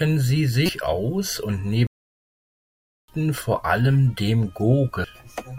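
At 0.66 to 0.69 s there's a short glitch, the classic sign of damaged data in a compressed stream: corrupt bytes throw the decoder off, it loses frame sync and skips ahead to the next header. A second, tiny blip of the same kind lands at 5.04 s.

Between 1.87 and 3.08 s the speech simply cuts out for about 1.2 s before picking up again, which sounds like a playback stall, likely the player starving for data or its thread getting blocked until output could resume.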